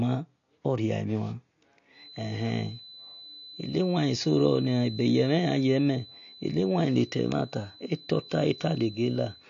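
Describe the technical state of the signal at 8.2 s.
A feedback whistle runs from 1.9 s to the end of the clip, so it is present at 8.2 s: a thin, steady tone at 4 kHz sits about 20 dB beneath the speech, swelling and fading slowly in level. It is likely a loudspeaker-to-microphone loop held just short of runaway.

AAC compression damage is also present at 8.2 s, as it is throughout. Nothing remains above 7.1 kHz, and the speech sounds dull and smeared, with a fizzy, warbling edge on sibilants. That fits AAC-LC at around 32 kbps quantising too coarsely.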